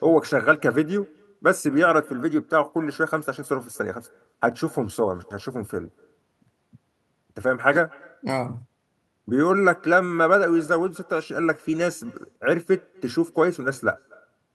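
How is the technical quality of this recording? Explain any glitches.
The recording has one fault, present from start to finish. Echo with no canceller runs throughout the speech. The far end plays the call over a loudspeaker, and its microphone picks it up again. Nothing removes it. So each phrase returns about a fifth of a second later. The copy sits about 28 dB below the speech, faint and thin.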